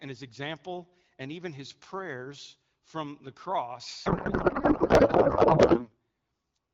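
Speech carried over AMR wideband, which sounds clean at a rate that fits 12.65 kbit/s, until a codec payload misread from 4.05 to 5.94 s turns it into garbled warble and noise. The frames look like octet-aligned AMR being unpacked as bandwidth-efficient, so every field lands in the wrong place.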